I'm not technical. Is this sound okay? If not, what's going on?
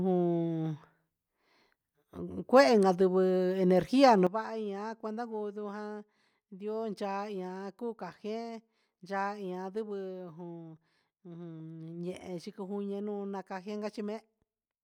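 No. At 4.27 seconds the speech suddenly drops to a much lower level and stays there until the end. This is a sudden gain jump. The background hiss drops at the same instant, so the speaker did not just move away. The recording's volume setting changed in one step, with no gradual fade. The likely cause is a level adjustment inside the recording software made while it was running.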